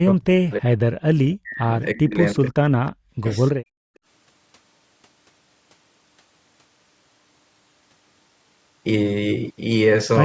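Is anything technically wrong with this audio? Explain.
Yes, there are three kinds of fault here, all tied to echo cancellation on a call.

Speech suppressed in double talk shows up four times: 0.0 to 0.74 s, 1.35 to 1.69 s, 1.94 to 2.7 s and 2.91 to 3.27 s. The speech dips sharply, by around 40 dB at its worst, and by about 25 dB in the 1.94 s stretch, so it thins out or drops away in pieces. The likely cause is that both ends were talking at once, and the canceller couldn't separate this talker from the loudspeaker echo, so it pulled everything down.

Background gated by the echo canceller hits twice. At 1.02 to 1.07 s there's a quick dip of about 32 dB, and from 3.55 to 4.02 s the room sound sinks by about 40 dB before coming back. While the far end was playing through the loudspeaker, the canceller clamped the mic hard. The room tone just vanishes for those moments and returns once it lets go.

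Echo leak appears as two tiny scraps, at 2.86 to 2.9 s and 3.95 to 3.99 s. Each is a copy of the voice arriving 320 ms late. The first is faint, well under the speech, and the second is barely there. It's likely the loudspeaker end's canceller didn't fully remove what its mic picked up, so a sliver of it got sent back. The top end stops at 8 kHz, which is just the call's normal mic processing.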